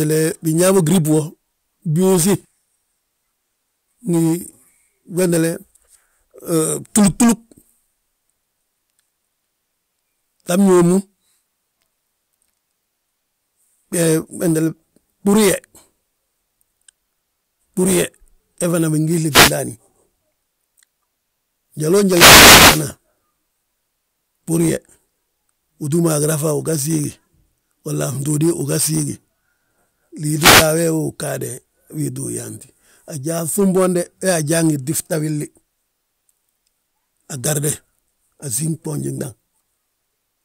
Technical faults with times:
19.30-19.53 wireless microphone noise hit
22.05-22.88 wireless microphone noise hit
30.35-30.72 wireless microphone noise hit

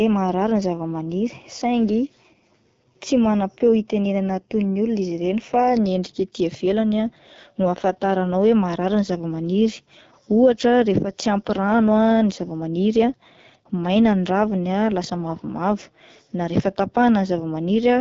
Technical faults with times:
0.00-18.00 AMR wideband (HD Voice) codec

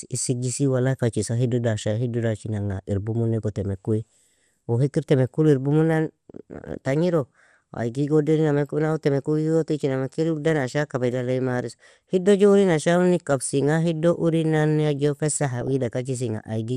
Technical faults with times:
0.00-16.76 MP2 compression
3.99-4.03 DAB burbling
15.61-15.86 DAB burbling

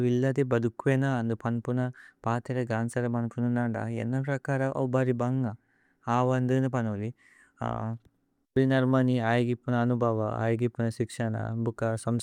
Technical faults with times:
none

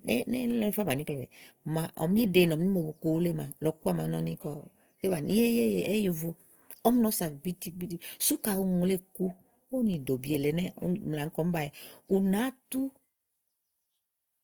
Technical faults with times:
0.00-14.43 Opus compression

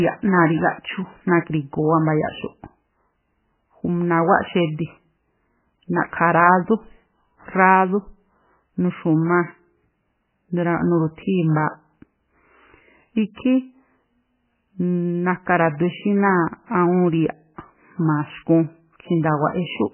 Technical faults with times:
0.00-19.93 MP3 compression

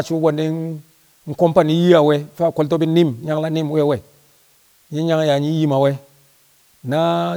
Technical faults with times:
0.00-7.37 low bit depth with dither

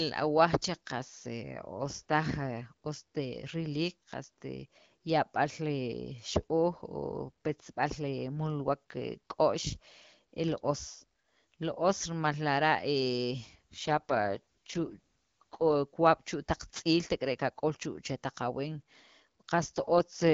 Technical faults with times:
13.85-15.75 AMR rate drop
19.76-20.33 AMR rate drop

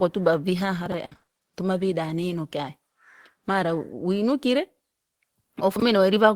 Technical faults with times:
0.86-0.94 chunks out of order
1.05-1.29 repeated packet loss (robotic sound)
5.76-5.82 chunks out of order

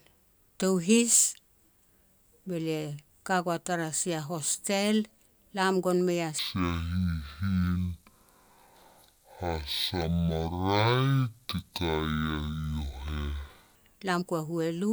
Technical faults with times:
6.39-13.75 stereo read as mono

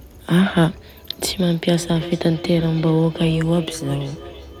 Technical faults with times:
1.76-4.60 feedback echo between two devices

